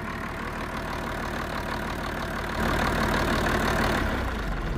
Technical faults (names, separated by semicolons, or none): sudden gain jump